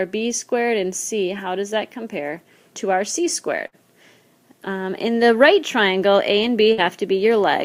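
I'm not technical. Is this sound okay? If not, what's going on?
No. Twice, at 3.67 to 3.76 s and 6.73 to 6.81 s, a burst of packet loss occurs. The last sound briefly carries on and fades, then jumps ahead with a small piece missing. A plain dropout would go silent instead.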